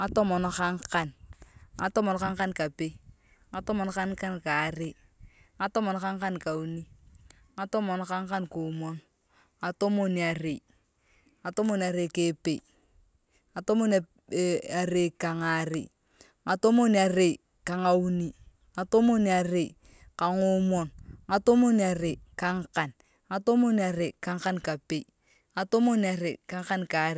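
No technical faults can be heard anywhere in the recording, and the signal stays stable and intact throughout.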